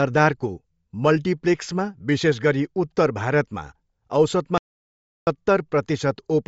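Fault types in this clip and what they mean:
Bluetooth LC3 compression: Throughout the speech the sound has a plainly audible grainy, breathy edge, and nothing is heard above about 7.7 kHz. This is likely the Bluetooth LE Audio codec at a low rate, which fits around 32 kbps with 10 ms frames: the coder discards much of the upper spectrum and patches the gaps with shaped noise, so the voice turns breathy and grainy while the top of the band is simply missing.
Audio dropout to silence: From 4.58 s to 5.27 s the speech cuts off abruptly and is replaced by about 0.69 s of silence, with no room tone or background left, before resuming mid-flow. Whatever was spoken in that span is lost. The likely cause is the input being interrupted, such as a broken link, disconnected device or momentary mute, while the recorder carried on writing silence.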